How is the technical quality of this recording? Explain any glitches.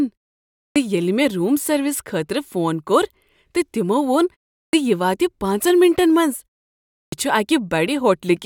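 The recording has one recurring glitch: clipped starts after a pause, at 0.66, 4.63 and 7.02 s. Each follows a gap of roughly 0.35 to 0.6 s, and each time about 0.1 s of speech is lost, so the speaker seems to begin mid-sound, snapping abruptly out of silence. The output device drops into a sleep state during the quiet and needs that tenth of a second to wake before audio passes again. Here the opening sounds themselves go missing.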